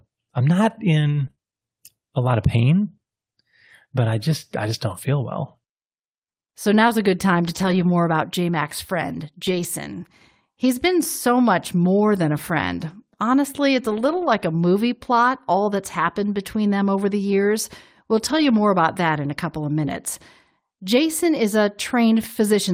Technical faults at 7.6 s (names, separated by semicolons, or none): lost packet rebuilt from error correction